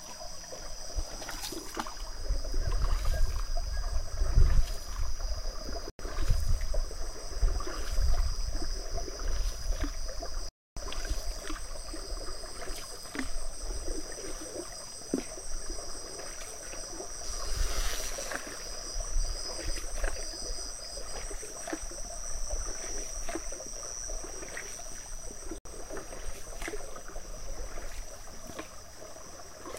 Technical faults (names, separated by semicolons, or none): Bluetooth dropout